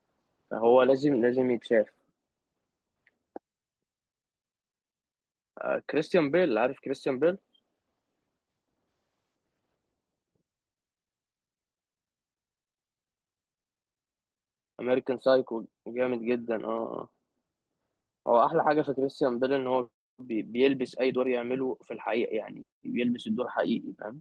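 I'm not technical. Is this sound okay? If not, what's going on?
Yes, nothing is wrong with this speech recording. It went through an ordinary internet call connection, so the very highest sounds above about 12 kHz are trimmed off, which is normal for a call.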